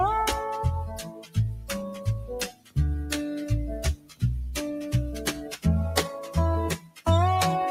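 A noise suppressor built for speech stays active on this non-speech sound throughout, treating sustained tones and ambience as noise. Level swings of around ten decibels make the sound pump and thin, whereas a compressor would react to loudness rather than to how steady the sound is.

Sound is cut by the noise suppressor at 0.87–1.37 s, 1.55–1.71 s, 1.89–2.07 s, 2.48–2.78 s, 3.95–4.23 s, 5.36–5.65 s and 6.77–7.05 s, with drops of about 7 to 17 dB. Held sounds and decays sink while onsets survive, unlike dropouts, which silence everything.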